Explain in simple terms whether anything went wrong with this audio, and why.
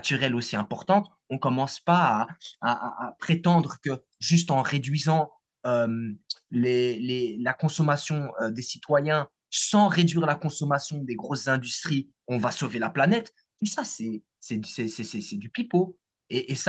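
Nothing went wrong here: the speech simply shows the ordinary traits of an internet call, with the microphone processing trimming the deepest bass and the call's codec keeping nothing above 8 kHz, both expected behaviour for this kind of connection.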